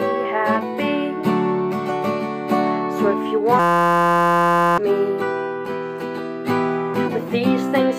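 From 3.59 s to 4.78 s the sound collapses into a steady, harsh buzz with a pitch near 172 Hz. This is a system hang loop. The computer or its audio driver stalled while the playback hardware kept cycling through the same ring buffer, replaying one 5.8 ms fragment around two hundred times. That loop length fits a 256-sample buffer. About a second of audio is lost, replaced by the buzz.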